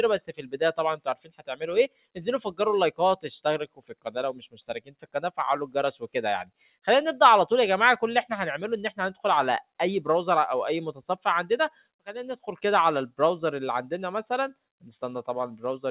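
Across the whole clip the level pumps and flutters by around 10 dB, with held tones and decays sinking while attacks come through. This is a noise suppressor applied to music or sounds: a speech-tuned suppressor treats steady material and tails as noise and turns them down.

Eight short passages drop further, each fading or thinning as if pulled under: 0.33 to 0.57 s (about 13 dB down), 0.97 to 1.55 s (about 17 dB), 1.88 to 2.18 s (about 17 dB), 3.66 to 4.11 s (about 18 dB), 4.33 to 4.63 s (about 17 dB), 4.79 to 5.17 s (about 17 dB), 6.44 to 6.76 s (about 10 dB) and 11.7 to 12.07 s (about 18 dB). Each is sound cut by the noise suppressor, where it judged that stretch to be noise and attenuated it more than the rest.

Throughout, nothing is heard above 4 kHz, which fits a G.711 mu-law call path at 64 kbps.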